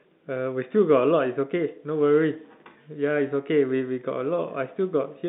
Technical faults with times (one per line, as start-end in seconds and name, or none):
none